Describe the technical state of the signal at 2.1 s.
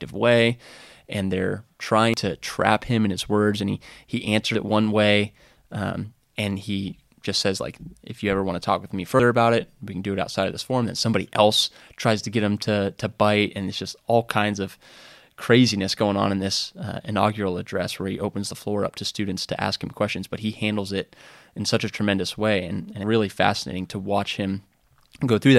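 At 2.14 s, just after "way and they're" and before "to trap him in", the speech jumps ahead with no gap. About a tenth of a second is missing. The likely cause is a dropped buffer (overrun), where samples were overwritten before being read and the two sides were joined directly.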